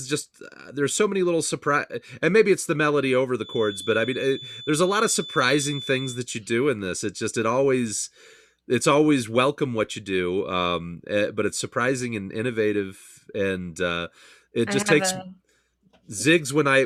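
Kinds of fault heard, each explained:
Feedback whistle: the loudspeaker-to-microphone loop likely sits at the brink of feedback, leaving a thin 3.5 kHz tone that swells and fades slowly, well below the speech.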